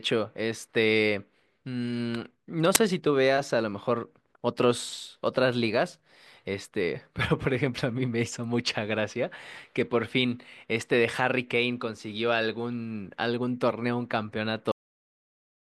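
At 2.75 s a short, loud crack cuts across the speech. This is an uninitialised buffer: about 10 ms of audio was played before anything had been written into it, so leftover memory contents came out as samples.

At 14.72 s the speech stops abruptly in the middle of a sound and drops straight to digital silence with no natural decay, staying silent to the end. This is a cut-off end: the final buffers were never written or played out.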